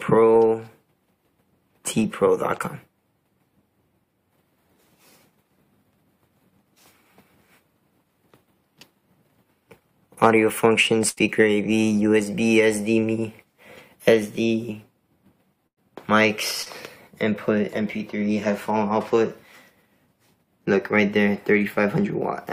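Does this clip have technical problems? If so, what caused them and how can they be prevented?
Yes. There are two bursts of packet loss, at 11.09 to 11.19 s and 15.67 to 15.79 s. About 80 ms and then 100 ms of audio never arrived in time. The receiver stretched the last sound into a fading buzz or hiss, then jumped ahead. Forward error correction and a deeper jitter buffer would help prevent this.

There is also one short concealed packet loss, at 16.63 to 16.68 s. About 40 ms went missing. The decoder filled the hole by continuing the previous sound, then blended back into the real audio. It leaves a brief smear or wobble. A steadier network path with less congestion would prevent it.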